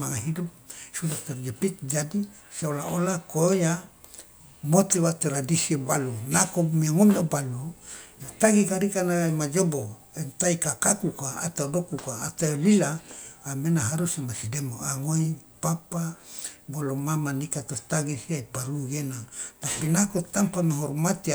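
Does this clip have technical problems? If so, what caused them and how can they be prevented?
No, this speech recording has no technical problems to point to. With nothing to trace, there is no cause to explain and no prevention to suggest.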